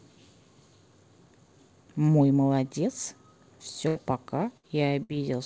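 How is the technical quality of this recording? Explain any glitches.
The recording has three short dropouts late in the clip, each caused by a burst of packet loss, heard through a call path that carries nothing above 8 kHz, which points to a wideband codec such as G.722.

Burst of packet loss, at 3.88 to 3.97 s, 4.57 to 4.65 s and 5.03 to 5.11 s: a run of audio packets never reached the receiver in time. The receiver filled each gap for about 60 to 75 ms by extending the last sound and fading it down, so the speech briefly smears into a held buzz or dying hiss. It then resumes with roughly 60 to 80 ms of speech missing.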